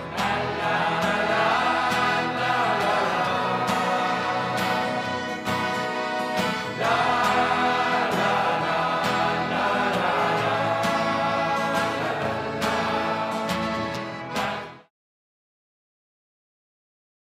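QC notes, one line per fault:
No faults heard.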